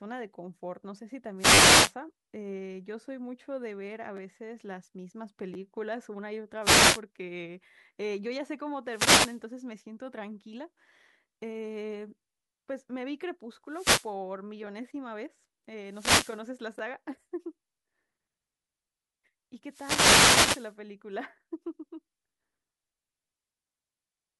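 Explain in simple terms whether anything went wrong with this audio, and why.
Six times the sound is hit by a short swish of static, sometimes with crackly clicks: 1.37–1.94 s, 6.61–7.01 s, 8.86–9.43 s, 13.68–14.13 s, 15.85–16.45 s and 19.66–20.77 s. This is a wireless microphone noise hit. An analogue radio microphone sends its signal through the air, and when reflections of that signal cancel each other the signal fades. The receiver's own hiss then rises and breaks into clicks, covering the speech for up to about a second.

Separately, there are tiny stutters or buzzy ticks at 1.54–1.58 s (inside the first static burst), 4.17–4.19 s, 5.54–5.56 s, 14.67 s and 16.79 s. This is a repeated buffer. Fresh audio didn't arrive in time, so the device replayed the last small slice instead. Each slice lasts about 10 ms, which fits a small playback buffer. That slice sounds one to four extra times with hard joins, so you hear a quick buzz rather than a stammer.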